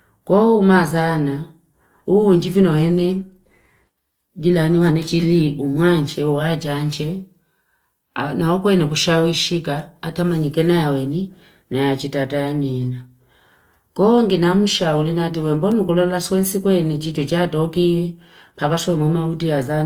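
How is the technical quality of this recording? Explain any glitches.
The technical quality is held back by one fault running through the whole speech recording: Opus compression. The grainy, rough texture throughout likely comes from Opus in its music (CELT) mode at a rate around 24 kbps. Starved of bits, it refills bands with folded or noise-like content instead of leaving gaps. On a spectrogram, the upper bands look speckled and noisy rather than holed, still reaching about 20.2 kHz.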